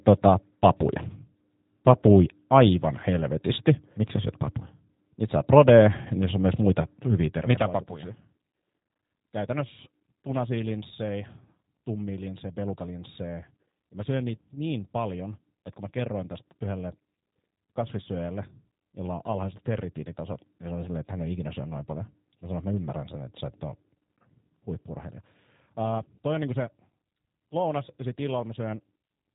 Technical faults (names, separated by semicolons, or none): G.729 codec